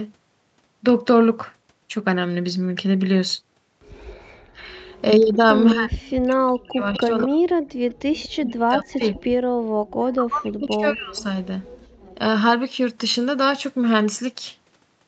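From 4.04 to 5.34 s a faint copy of the speech trails it by 0.2 s, about 30 dB down. This is an echo leak, likely where a loudspeaker's sound got past the far end's echo canceller and was sent back. On a spectrogram the harmonic pattern appears twice, the second trace weak and offset by 0.2 s.

From 5.73 to 7.76 s the speech is speech suppressed in double talk, likely because the canceller could not tell the talker from the echo and turned both down. For roughly a second and a half the level drops in pieces, at worst about 40 dB, so syllables thin out or vanish. Within this stretch, from 6.93 to 7.24 s, the echo comes back much stronger, about 15 dB below the speech. More echo follows from 7.9 to 8.29 s, about 25 dB down.

Further suppression runs from 8.4 to 9.18 s (about 0.7 s affected, deepest about 35 dB) and from 10.13 to 11.36 s (about 1 s, deepest about 40 dB). The waveform shows sudden hollows in the envelope, and the spectrogram shows whole columns fading out.

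The last echo runs from 11.19 to 11.88 s, again about 25 dB down and 0.2 s late.

At 11.89 s the background gated by the echo canceller dips by about 17 dB for about 150 ms, then recovers. On the spectrogram this is a brief dark notch across the noise floor. The 8 kHz ceiling from the Opus call path sits throughout, and the coding points to roughly 32 kbps.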